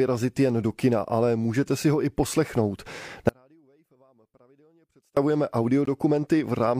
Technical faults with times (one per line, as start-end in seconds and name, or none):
3.29-5.17 audio dropout to a faint residue
5.85 gap between stream segments